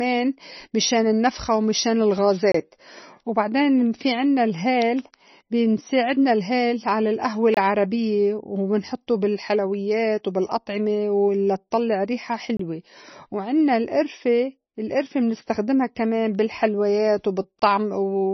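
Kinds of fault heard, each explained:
MP3 compression: The sound has nothing above 5.9 kHz, so the treble is cut off flat and sibilants lose their edge. Heavy damage is audible throughout. The tone turns watery and swirly as weak frequency components drop in and out between frames. Sharp onsets smear. The cause is likely MP3 encoding at a very low bitrate, around 26 kbps, where the encoder drops the top band and discards quiet detail to save bits.
Gap between chunks: The audio stops dead for about 25 ms at 2.52, 7.54, 12.57 and 17.59 s. The spacing is about 5 s, which shows the audio was handled in 5-second chunks with a short silence inserted at each join. No content is missing. The flow is simply broken at every boundary, giving a regular stutter.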